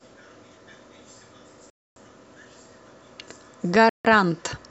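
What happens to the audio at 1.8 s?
At 1.8 s the speech drops out completely, a gap of about 0.26 s running from 1.70 to 1.96 s before the sound resumes. This is likely a Bluetooth stall: radio interference delayed packets, the headphones used up their buffered audio, and playback halted until retransmissions caught up. On a waveform the trace flattens to near silence across that span. A spectrogram shows a clean vertical band of blank across all frequencies, with sharp edges on both sides.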